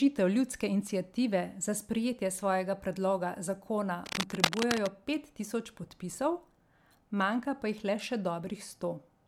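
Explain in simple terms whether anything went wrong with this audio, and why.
Something did go wrong: from about 4.04 to 4.88 s there's cable scratch noise, a burst of uneven scratching and rustling roughly as loud as the speech. The likely cause is a worn cable or connector being moved, so its contact kept changing.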